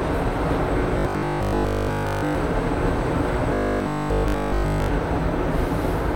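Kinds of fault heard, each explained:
Robotic sound from repeated short buffers: from 0.99 to 2.35 s and 3.54 to 4.90 s the sound becomes a rigid metallic buzz at 50 Hz, likely because new audio arrived too seldom and a 20 ms slice looped almost continuously.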